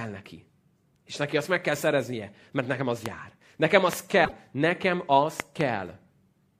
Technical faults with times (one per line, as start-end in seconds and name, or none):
3.06-3.08 loud pop
3.93-3.95 loud pop
4.21-4.33 damaged data in a compressed stream
5.40-5.63 loud pop